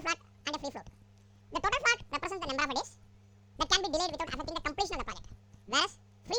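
From the first moment to the last, the clip plays as audio read two samples at a time (double speed). The reader treated each pair of samples as a single frame, as if the data were two-channel or twice as wide, so everything runs at 2.0 times speed and an octave high. On a waveform, every event is squeezed to half its length. On a spectrogram, all content sits an octave up.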